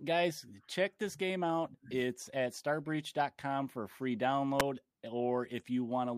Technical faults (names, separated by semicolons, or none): electrical switching spike